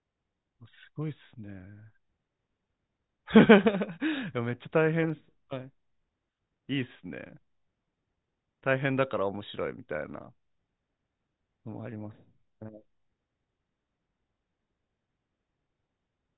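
Speech recording with no audible technical faults.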